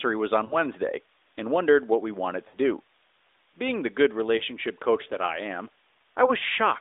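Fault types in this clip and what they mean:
Lost AMR speech frames: Radio bit errors corrupted 20 ms frames, and the decoder bridged each gap by repeating the last good speech settings at falling level. Short dips and warbles result at 0.46, 2.48 and 4.38 s, lasting 40, 60 and 20 ms.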